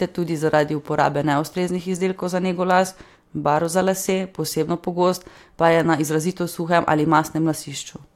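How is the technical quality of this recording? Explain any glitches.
Nothing here calls for explanation, because there are no glitches to be heard anywhere in this speech recording.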